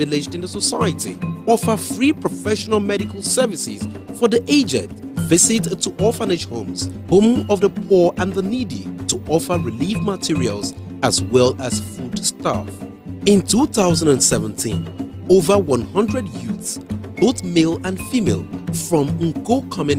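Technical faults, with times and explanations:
No technical faults can be heard in this audio.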